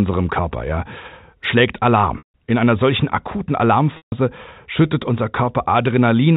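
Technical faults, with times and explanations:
2.18 s and 3.97 s (after "einer solchen akuten", before "schüttet unser"), packet loss with pitch repetition: about 160 ms and 150 ms of audio went missing. The receiver repeated the last pitch period, giving a brief buzzy hold that fades to silence within about 50 ms before speech cross-fades back in over the narrowband telephone coding.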